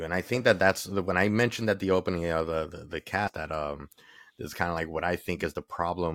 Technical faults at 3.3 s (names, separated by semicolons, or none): compressed frames skipped